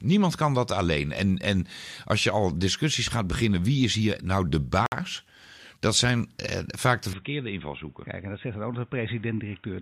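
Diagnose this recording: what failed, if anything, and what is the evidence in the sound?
At 4.86 s the speech drops to silence for 58 ms, until 4.92 s, and then resumes. This is most likely a Bluetooth stall at the wireless link and playback buffer stage: interference delayed packets, the receiver's buffer emptied, and output paused until the retransmitted packets arrived. On a spectrogram it shows as a narrow blank vertical band across all frequencies. The waveform has a brief flat gap with abrupt edges on both sides.

From 7.13 s to the end, the speech turns dull and boxy, with no audible break at the change. The likely cause is the input switched to a poorer device at the driver or device-routing stage, either a different microphone or a headset's call profile. Nothing above 3.8 kHz remains, the level falls by about 5 dB, and a new noise floor sits about 40 dB below the signal. On a spectrogram the upper band empties abruptly at 7.13 s, leaving a flat ceiling. 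The waveform envelope steps down there.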